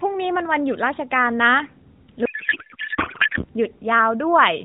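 From 2.26 to 3.45 s, a codec payload misread unpacks the AMR bits in the wrong layout, so the speech becomes garbled warble barely tracking it. Unlike packet loss, the sound never drops out.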